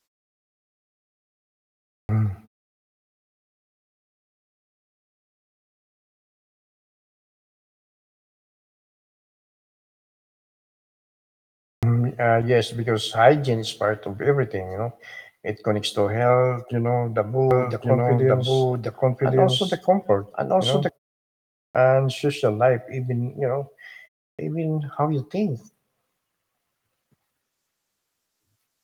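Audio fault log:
2.05 s, 11.79 s, 21.71 s, 24.35 s: clipped start after a pause. The output device sleeps in silence and must wake again. About 37–40 ms is lost at each restart, so speech bursts in abruptly without its first sounds.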